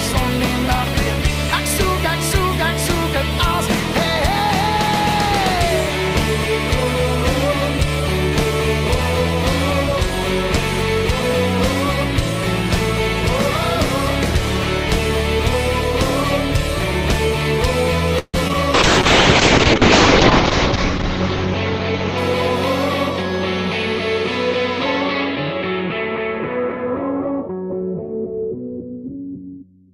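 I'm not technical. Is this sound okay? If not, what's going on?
No, it has several faults, all in the second half.

At 18.19 to 18.36 s there is a call audio freeze: the sound stretches into a fading buzz with a brief silence, then resumes where it stopped. The likely cause is delayed packets that left the receiver nothing to play.

Right after, at 18.48 to 18.51 s and again at 18.53 to 18.56 s, come two short concealed packet losses. Small pieces never arrived in time, so the receiver patched each gap by extending the previous sound, which makes a quick smear or wobble.

From 18.74 to 23.48 s there is a call bitrate drop. The connection squeezed the audio much harder, so it turns rough and muffled, with everything above 8 kHz gone. It is at its worst for about 1.7 s before recovering.

From 25.98 to 27.83 s a jitter buffer speed-up plays the sound about 5% fast at unchanged pitch. Around a tenth of a second was trimmed in small slices to catch up after the earlier delay, so it sounds slightly hurried.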